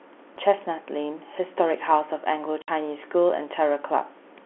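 A short, hard-edged gap cuts the speech from 2.62 to 2.68 s. That is packet loss filled with silence: about 60 ms of audio never arrived, which fits three lost 20 ms packets, and the receiver played nothing in their place over the telephone-band G.711 line.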